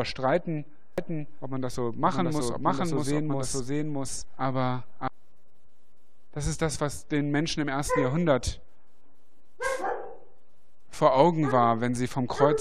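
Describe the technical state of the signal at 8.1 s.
At 8.1 s the signal is intact, with no dropout, distortion, glitch or other fault audible at that moment.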